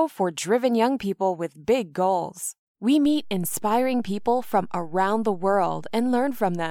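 At 3.06 s a DC step occurs: the waveform's zero line jumps to an offset of about -35 dBFS and holds there to the end of the clip. The sudden shift is heard as a single low thump, while the speech continues unchanged.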